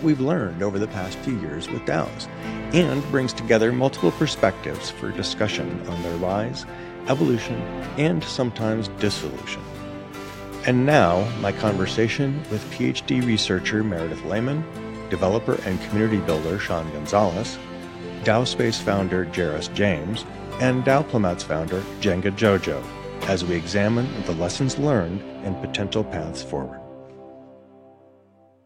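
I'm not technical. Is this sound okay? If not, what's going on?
Yes, this sound is okay; nothing is wrong here.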